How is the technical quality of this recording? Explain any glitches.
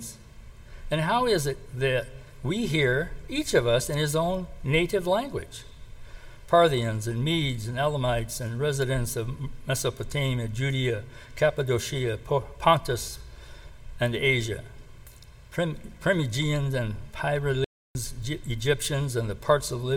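The recording has one clear glitch near the end. From 17.64 to 17.95 s there is an audio dropout to silence lasting about 307 ms. The input was likely lost briefly while writing continued, so the sound cuts off abruptly into dead digital silence with no room tone, then resumes mid-flow. On a waveform it shows as a flat line; on a spectrogram it shows as a fully black vertical band.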